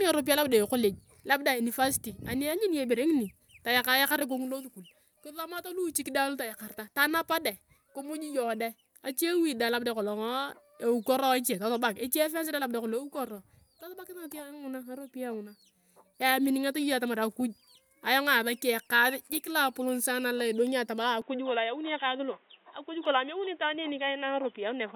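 At 21.22 s the speech suddenly turns dull and boxy, and it stays that way to the end. Nothing above 3.8 kHz survives from that point. There is no gap at the change. The level shifts by a few decibels, and a new, faint background noise appears, far below the speech. This points to an input switched to a poorer device, likely a headset or a second microphone with a narrower band and its own noise floor.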